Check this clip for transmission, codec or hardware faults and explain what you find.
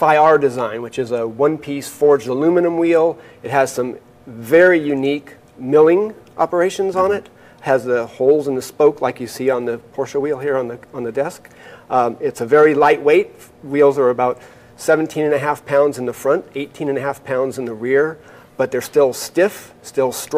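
Nothing in this one raises a flag; it's a tidy clip with no transmission, codec or hardware trouble anywhere in it.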